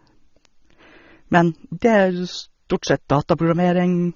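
From the first moment to the end, the speech sounds band-limited, with nothing above about 6.9 kHz, and the codec damage is plainly audible: a dull, smeared quality where the top octave should be. That points to AAC compression, likely AAC-LC at a low rate, something in the region of 24 kbps, where the encoder pulls its cut-off down and spends its few bits on the bands the hearing model ranks highest.

At 0.45 s there's a single bit error spike, one sample long. A flipped bit in memory or on a digital link makes that sample jump by a power of two and then snap straight back. You hear it as one sharp tick, broadband and unrelated to the speech around it.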